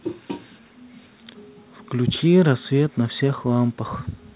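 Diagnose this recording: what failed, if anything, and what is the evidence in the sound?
Nothing stood out on listening to this speech recording; it has the narrow, telephone-like bandwidth of a call path with nothing above 4 kHz, and no failure could be heard at any point.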